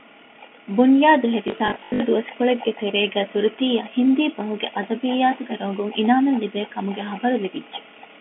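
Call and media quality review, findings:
Packet loss with last packet repeated, 1.48 to 2.0 s: choppy robotic stutter. About 280 ms missing across 520 ms, longest gap 80 ms. Jitter buffer concealment replaying stale packets, buzzing near 50 Hz, which fits 20 ms packets. G.711 mu-law call leg audible as a 200 Hz to 3.4 kHz telephone band.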